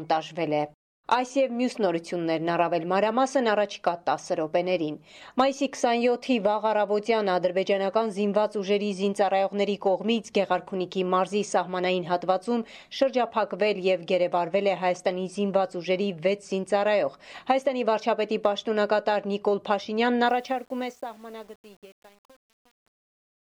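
The sound fades out over its last three seconds or so, ending at 23.6 s. From 20.26 s to the end there is truncation distortion on the fade. It is worst from 20.6 s onward. The quiet tail turns gritty. The level stage drops fine detail without dither, which fits an 8-bit stage.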